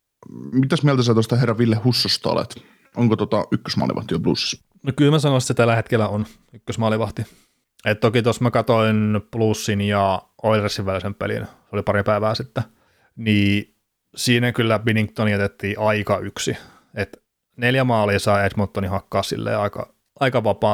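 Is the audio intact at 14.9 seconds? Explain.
No. At 14.89 s, between "sitten niin siinä kyllä" and "jätettiin aika yksi", an electrical switching spike adds a sharp snap peaking around -20 dBFS, likely a nearby switch arcing into the audio line. Unlike a dropout, the speech continues underneath without any gap.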